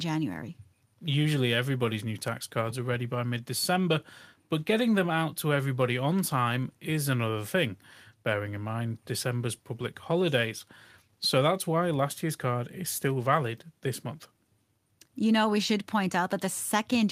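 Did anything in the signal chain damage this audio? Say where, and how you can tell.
No, nothing I can hear in this speech points to damage at any stage of the chain.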